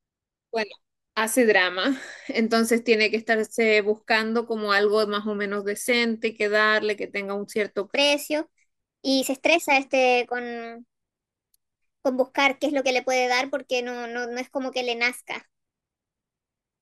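A section at the wrong speed runs from 7.95 s to the end of the clip. From that point the speech plays about 1.21 times faster than it was recorded, and because speed and pitch are locked together, the voice jumps up by about three semitones at the same moment it starts to hurry. The likely cause is that this part was played back or edited against the wrong clock, so its timing no longer matches the first half.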